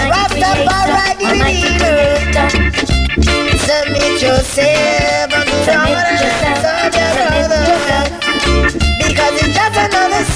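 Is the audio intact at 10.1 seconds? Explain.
Yes, the audio at 10.1 seconds is intact, with no dropout, click, distortion or other fault audible at that moment.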